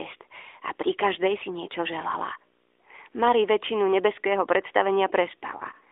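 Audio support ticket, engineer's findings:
Lost AMR speech frames at 5.58–5.62 s: one brief dip and warble near the end of the clip, about one 20 ms frame. The decoder filled the gap by repeating the last good pitch and vocal-tract settings at reduced gain. Unlike a hard packet-loss gap, there is no click or silence, just a smeared fill, with the voice coming back weak or rough for a moment. The AMR narrowband mobile codec path is audible as band-limited audio running up to about 3.6 kHz, at 12.2 kbps.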